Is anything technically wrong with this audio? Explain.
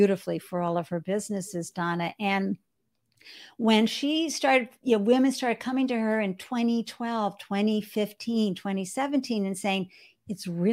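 Yes. Clock slip clicks run from 0.13 to 10.68 s, a faint tick about every 70 ms, likely from unsynchronised clocks about 300 ppm apart dropping or repeating single samples.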